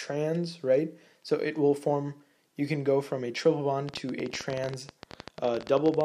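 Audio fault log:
3.89–6.02 s, train of clicks: a run of roughly forty sharp, similar-shaped ticks at about 16 per second, unevenly spaced and standing clearly above the sound, likely from electrical interference or a faulty connection injecting repeated brief pulses into the signal path.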